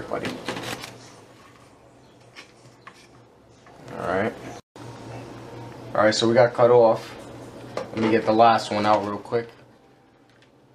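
From 8.88 to 10.0 s, a gain reduction is applied in unsmoothed 2 dB jumps rather than a continuous ramp, at around seven steps a second, bringing the level down by about 15 dB. Each jump clicks, so zipper noise rides on the falling sound as a rapid ticking.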